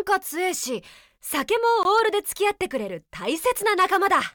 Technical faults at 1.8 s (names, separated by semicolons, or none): block of digital silence